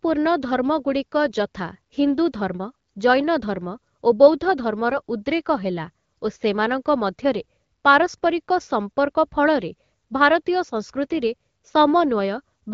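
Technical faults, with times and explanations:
4.91 to 5.00 s, AMR bit errors: for about 90 ms the speech turns hoarse and gargly but keeps its pitch and level. Flipped low-priority bits misplace the excitation pulses and skew fine pitch, gain and spectral values, across what fits five frames.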